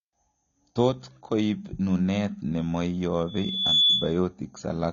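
Throughout, the speech sounds dull and warbly with nothing above 6.9 kHz, likely AAC compression at a low bitrate around 24 kbps; a spectrogram shows a hard ceiling. From 3.27 to 4.19 s a loudspeaker feedback squeal appears as a single 3.4 kHz line, swelling over roughly half a second to around 10 dB above the speech.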